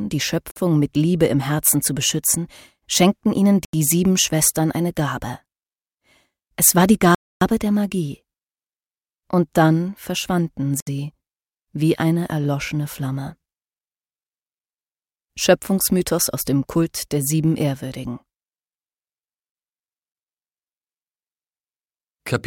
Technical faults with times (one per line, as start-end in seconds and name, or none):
0.51-0.56 Bluetooth stall
3.65-3.73 Bluetooth stall
7.15-7.41 Bluetooth stall
10.80-10.87 Bluetooth stall